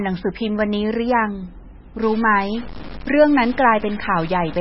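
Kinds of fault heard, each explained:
MP3 compression: Heavy watery, swirly smearing with nothing above 5.6 kHz, likely from a very low bitrate near 18 kbps; the spectrogram shows a hard ceiling and patchy, flickering holes.
Low bit depth without dither: From 2.03 s on, grainy distortion tracks the sound, roughly 20 dB down, likely 5-bit truncation; the waveform shows coarse stair-steps.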